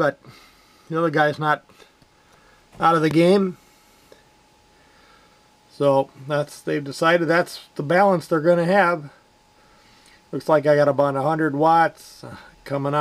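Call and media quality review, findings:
Loud pop, 3.11–3.13 s. Likely a voltage transient in the capture chain (a connector, switch, static discharge or driver glitch) added to the signal. Downstream circuitry shapes it into a single sharp pop, peaking a few dB above the programme, with the sound continuing underneath.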